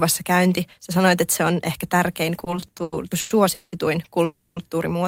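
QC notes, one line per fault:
2.39–3.75 s, repeated stalls (stutter): eleven short holds, the longest 180 ms, stretch this span by about 490 ms, over a third of it concealed. Packets kept arriving behind playback, so the jitter buffer emptied repeatedly and the receiver extended the previous sound each time. Nothing is lost, but the audio drags and hiccups.
4.24–4.59 s, call audio freeze: the sound hangs and is carried on for 320 ms, fading to about 10 ms of silence before resuming where it stopped. This is likely a delivery hold-up that drained the jitter buffer, so playback falls 320 ms behind while nothing is skipped.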